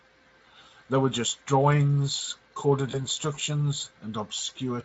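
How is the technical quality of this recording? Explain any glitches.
The recording has one glitch: VoIP packet loss concealed by the speech codec, from 2.91 to 3.03 s. About 20 ms of audio, roughly one frame, never reached the decoder, so it filled the gap by carrying its last pitch and filter forward at falling gain. Because each later frame depends on the one before, the damage outlasts the gap. The sound briefly smears into a buzzy tone or coloured noise that fades, and stays weak or distorted for about 0.1 s before recovering. Elsewhere the Speex coding adds only light colouring.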